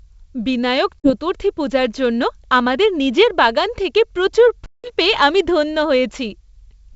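Packet loss on an ADPCM call cuts two hard-edged silent holes: about 40 ms near 1.00 to 1.12 s, then 180 ms from 4.66 to 4.92 s. The decoder's predictor and step size lose track of the sender's. Speech returns with brief distortion, then settles.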